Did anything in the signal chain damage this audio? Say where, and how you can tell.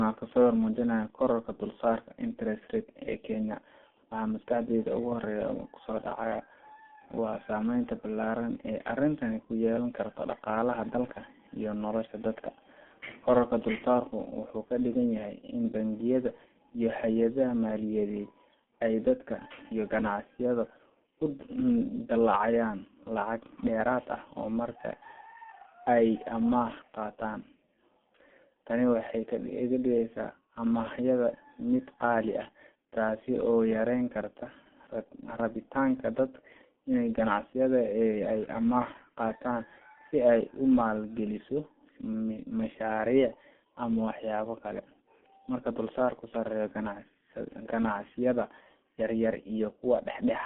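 Yes, at the codec stage: G.723.1 coding damages the speech throughout. It sounds muffled and hoarse with blurred consonants, which fits a bitrate around 6 kbit/s. A spectrogram would show nothing above about 3.4 kHz or below 200 Hz, with consonant onsets smeared across 30 ms frames.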